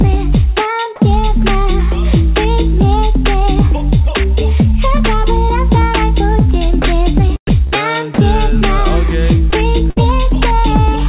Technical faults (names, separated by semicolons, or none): sound dropped by the voice detector; short concealed packet loss; burst of packet loss